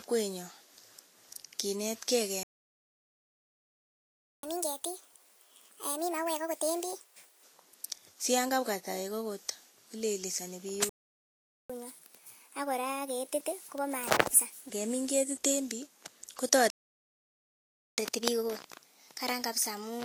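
Throughout the speech there is a hissy, grainy edge: sibilants smear into noise, vowel tones sound roughened and consonant attacks are blurred. This is plainly audible Vorbis compression, likely at a low bitrate, around 35 kbps judging by the damage. At that rate the encoder lowers its cut-off and quantises the treble so coarsely that fine detail is replaced by noise of similar energy.

At 2.43 s the speech stops dead in mid-flow and stays silent for 2 s, until 4.43 s. This is a playback stall, most likely the player running out of data or its thread being held up. Two more stalls follow: from 10.89 s to 11.70 s (0.8 s of silence) and from 16.70 s to 17.98 s (about 1.3 s).

Each stall is followed by catch-up at higher speed. The speech comes back hurried and raised in pitch as the player resamples its backlog to win back lost time. From 4.43 to 7.43 s it runs at 1.5 times normal speed, a jump of roughly seven semitones. 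From 11.70 to 14.70 s it runs at 1.25 times, about four semitones up. From 17.98 s to the end it runs at 1.1 times, a slight lift of one or two semitones.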